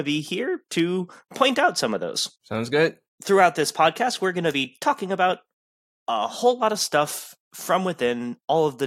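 Nothing in the speech recording stood out as a technical fault on listening.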